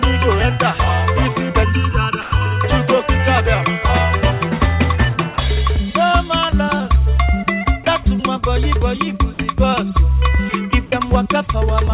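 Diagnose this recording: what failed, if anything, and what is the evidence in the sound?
From 1.64 to 2.64 s the sound turns hollow and phasey, with fixed notches starting near 700 Hz. That's channel delay (comb filtering). One channel ran late by under a millisecond before the two were summed to mono, so their shared content cancels at evenly spaced frequencies.

There are three short gaps filled with steady noise: 2.22 to 2.32 s, 5.34 to 5.38 s and 8.04 to 8.06 s. This is likely sound dropped by the voice detector at the call-processing stage. The sender judged the audio to be background and stopped sending, and the receiver played comfort noise until the detector triggered again. The noise fill sits within the call path's band, which has nothing above 4 kHz.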